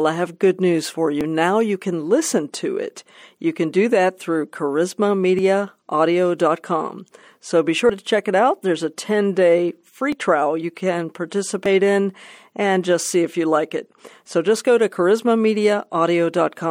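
Small jumps forward in the speech at 1.21, 5.39, 7.90, 10.12 and 11.66 s, each skipping roughly 10 to 40 ms: likely dropped buffers (overrun), with samples overwritten before being read.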